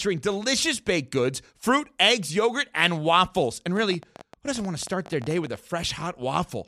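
From 3.77 to 5.57 s, a train of clicks ticks over the speech. About thirty clicks, unevenly spaced, near 17.9 per second, roughly as loud as speech. Interference is the likely cause.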